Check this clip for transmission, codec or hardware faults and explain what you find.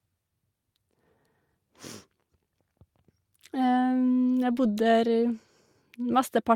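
No faults can be heard anywhere in this speech recording.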